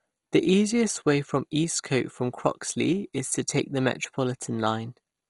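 The speech was most likely squeezed through MP2 compression at a low bitrate, which fits roughly 56 kbps. The MPEG Layer II coder splits the signal into 32 sub-bands and, short of bits, drops the upper ones entirely, so nothing survives above 11.2 kHz. The remaining bands are quantised coarsely and flicker in and out, leaving the whole clip dull, with heavy gurgling, granular distortion from start to finish.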